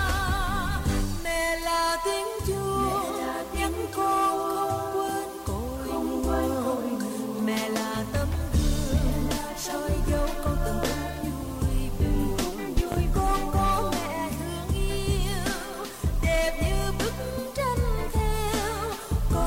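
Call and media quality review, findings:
Loud pop, 10.83 to 10.95 s: voltage step or pulse entering the chain, likely from a plug, switch, static discharge or driver glitch. Heard as a sharp double pop around 15 dB above the signal, sound continuing underneath.

Loud pop, 12.77 to 12.96 s: likely same source and mechanism, a transient shaped by downstream circuitry. Again two pops in quick succession at around 15 dB over the signal, sound carrying on beneath.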